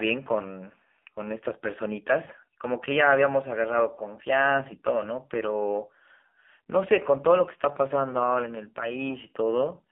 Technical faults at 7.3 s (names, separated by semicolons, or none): AMR narrowband mobile codec